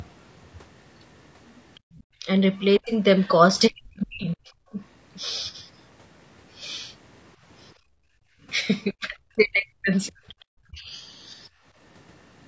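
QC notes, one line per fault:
Throughout: low-delay AAC compression. The speech has a rough, grainy texture, with noise filling the gaps between pitch harmonics. The likely cause is AAC-ELD's short frames, which resolve harmonics poorly and spend bits quickly. The damage is plainly audible and fits a bitrate around 32 kbps. On a spectrogram the harmonic stripes look smeared and speckled, with a noise floor between them. The band stops at 8 kHz, which is the call chain's normal limit.
1.80–1.92 s, 7.75–8.46 s, 11.50–11.64 s: background gated by the echo canceller. The room sound drops out briefly and returns, by about 33 dB, 24 dB and 13 dB respectively. The second gap lasts most of the 7.75–8.46 s span. The canceller pulled the microphone down while the loudspeaker was active. On the waveform the noise floor shows flat troughs with fairly sharp edges, and on a spectrogram the background energy thins across all bands.
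1.95–2.03 s, 3.20–3.31 s, 10.28–10.45 s: other side's voice leaking through. A faint second voice appears in short scraps, about 35 dB below the talker in the first and about 30 dB below in the other two. It is likely residual echo of the far end that the canceller did not remove from the microphone. On a spectrogram these show as weak, separate harmonic traces that do not line up with the main voice's pitch.
2.20–4.78 s, 8.92–10.94 s: speech suppressed in double talk. The talker's voice dips and breaks up in pieces, by as much as about 40 dB. Roughly a second of the first span and about one and a half seconds of the second are affected. The likely cause is the canceller damping everything while both sides spoke. The waveform shows the envelope repeatedly collapsing mid-phrase, and on a spectrogram the upper harmonics vanish first, leaving ragged gaps.
10.70–10.74 s: AAC frame loss with muting. 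A single frame of about 30 ms goes missing, inside the second double-talk stretch. The decoder zeroed its spectrum, so the overlapping windows fade the sound out and back in and leave a brief dip. On the waveform it looks like a short tapered notch, and on a spectrogram like a narrow vertical blank band with blurred edges.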